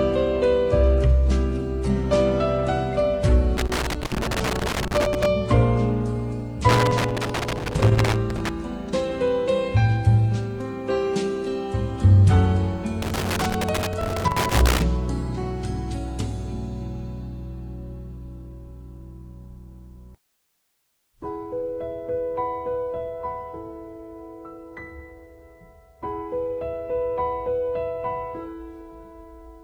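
Irregular bursts of crackle and scratching, loose connector crackle, appear at 3.57–5.26 s, 6.69–8.49 s and 13.02–14.82 s, where a worn contact repeatedly makes and breaks, chopping the signal.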